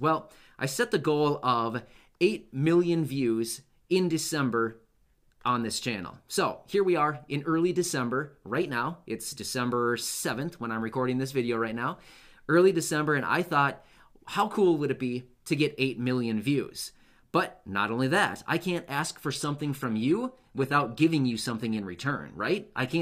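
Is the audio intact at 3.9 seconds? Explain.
Yes, the audio is intact at 3.9 seconds, with nothing there to interrupt or disturb the signal.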